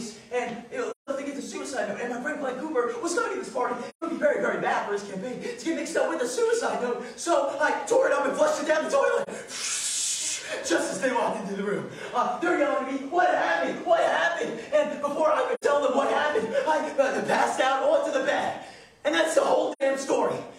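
Soft-edged holes at 0.91, 3.89, 15.54 and 19.72 s and a brief dip at 9.23 s, about 0.06 to 0.19 s long: AAC frame loss with muting, with lost frames decoded as silence.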